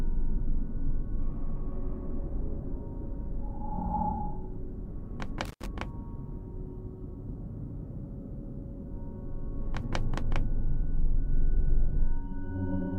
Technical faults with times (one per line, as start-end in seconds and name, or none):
5.45-5.66 intermittent contact